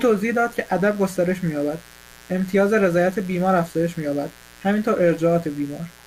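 A mains buzz runs under the speech for the whole clip, locked to 60 Hz mains. Switching spikes from a dimmer, rectifier or unshielded cable get into the signal path twice per cycle. The result is a dense stack of 60 Hz harmonics climbing into the kilohertz range. It sits roughly 25 dB below the speech and is heard as a constant, gritty rasp, not a smooth low hum.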